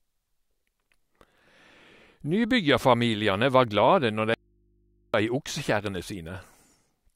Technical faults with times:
4.34-5.14 audio dropout to a faint residue

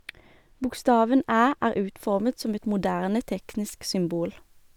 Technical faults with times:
0.00-2.00 de-emphasis applied wrongly

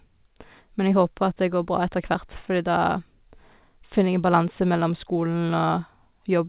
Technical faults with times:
none

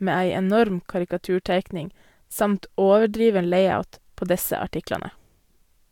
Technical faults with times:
none

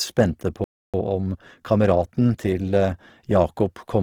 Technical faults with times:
0.00-4.03 Opus compression
0.64-0.94 playback stall
0.94-2.90 time-compressed catch-up

